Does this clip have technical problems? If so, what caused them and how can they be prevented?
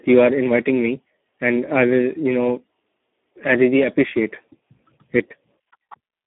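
Yes. Throughout the speech the Speex codec damage is heavy: the voice sounds hoarse and noisy, which fits a low Speex setting around 8 kbps, where too few bits remain to code the excitation. The band runs only from about 200 Hz to 3.6 kHz, with nothing above 3.8 kHz. Unlike a clean telephone band-limit, the rasp and noise sit inside the passband. To prevent it, use a higher Speex quality or wideband mode, or a modern codec such as Opus.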